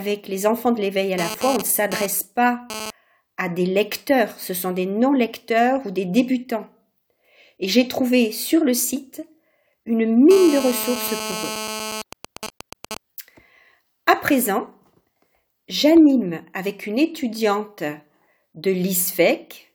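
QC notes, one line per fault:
1.18 to 2.91 s and 10.31 to 12.02 s: GSM phone buzz. A hard, raspy buzz with a dense stack of harmonics sits about 9 dB below the programme, unrelated to it. A nearby 2G phone transmitting at 216.7 bursts per second, first during a data transfer and later during a call, is being rectified by the audio circuit.
12.13 to 12.97 s: GSM signalling bursts. Straight after the second buzz, even ticks with a longer buzz twice a second appear at roughly 10 dB below the signal. The phone is still on a call but its user has gone silent, so it sends only short groups of bursts, which the circuit rectifies.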